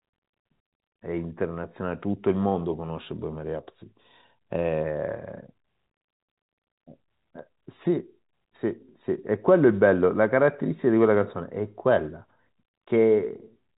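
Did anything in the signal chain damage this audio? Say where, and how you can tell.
No, nothing in the chain has damaged this speech. It has passed through G.711 telephone coding, which is heard as a narrow band with nothing above about 3.8 kHz and at most a faint quantisation hiss riding on the level, exactly what that telephone format leaves behind.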